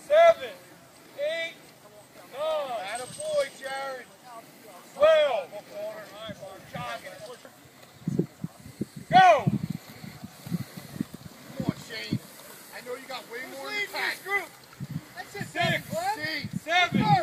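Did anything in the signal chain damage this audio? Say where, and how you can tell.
Yes: bit error spikes at 0.44 s and 3.64 s, single-sample ticks of about -34 and -22 dBFS, where a flipped bit in storage or a digital link jumped the value and returned.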